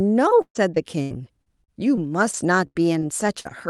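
From 0.41 s to 3.47 s the speech shows repeated packet loss with a robotic sound: ten short gaps, the longest about 134 ms, totalling around half a second. Each hole is covered by stretching the previous sound forward, so about 16% of the span is concealed and roughly a fifth of a second is only roughly rebuilt. The result is choppy speech with clipped fragments, heard over a call-codec band that stops near 12 kHz.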